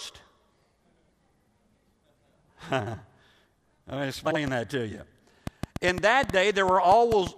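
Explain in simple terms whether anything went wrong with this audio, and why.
Two problems can be heard in this speech. Around 2.80 to 2.95 s and again at 4.25 to 4.36 s, frames out of order swap two short blocks of sound, causing a brief garbled flutter. From 4.48 to 7.28 s a train of clicks adds about ten uneven ticks, roughly four per second, clearly louder than the speech. These are likely from electrical interference or a faulty connection.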